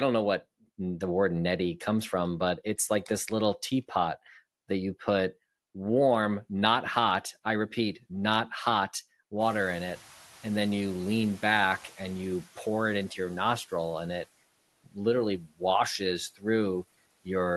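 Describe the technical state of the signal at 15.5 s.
At 15.5 s the noise suppressor is cutting speech: from 15.38 to 15.62 s it mistakes part of the sound for the risen room noise and pulls it down by about 19 dB, so it sounds swallowed. The waveform dips sharply, and the spectrogram fades there.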